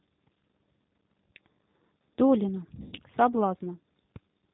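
From the start, the speech carries G.729 codec coloring, plainly audible: an 8 kbit/s rebuild from a vocal tract filter, pitch predictor and sparse pulses. It cuts everything above 4 kHz and leaves the voice band-limited, slightly rough and synthetic throughout.

From 2.82 to 3.00 s, VoIP packet loss concealed by the speech codec takes over. About 120 ms of audio is missing, scattered over 160 ms, with the longest gap 100 ms. The decoder stretches its last pitch and filter into a fading buzzy tone or coloured noise, and the voice stays weak briefly afterwards.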